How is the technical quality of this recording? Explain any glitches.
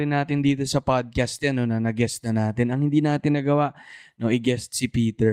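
No glitches to speak of; nothing in this recording stands out as a technical problem.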